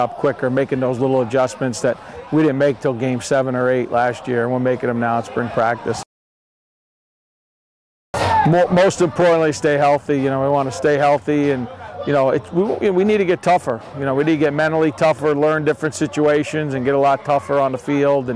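Nothing stood out as a technical problem on listening.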